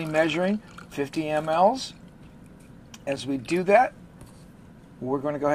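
At 1.15 s the sound drops out for about 8 ms. At 3.16 s it drops out again, for about 5 ms. Both are a gap between stream segments. The two events sit 2 s apart, matching a 2-second segment length. At each boundary, the time stamps left a small space between one segment and the next. The player filled that space with silence. Nothing is missing from the audio. Each hole has hard edges and briefly interrupts the sound.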